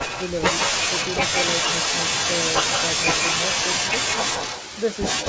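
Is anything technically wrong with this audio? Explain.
Yes. An echo leak runs from 0.00 to 0.42 s, 0.59 to 5.04 s, and 5.20 s to the end. A delayed copy of the speech trails by about 160 to 170 ms, only slightly quieter than the original after the first span. The likely cause is a far-end speakerphone whose echo canceller let its microphone pickup through. Unlike room reverb, this is a distinct repeated copy rather than a smooth decaying tail.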